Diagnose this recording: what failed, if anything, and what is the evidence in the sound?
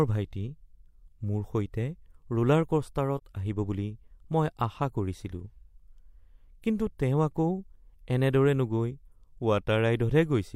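Codec stage: AAC frame loss with muting leaves a brief dip from 3.17 to 3.22 s, just before "আহিব বুলি মই আশা". The decoder zeroed a missing frame's spectrum, about 43 ms, and the overlapping windows fade out and back in. On a spectrogram this appears as a full-band faded stripe with blurred edges, and on the waveform as a tapered dip.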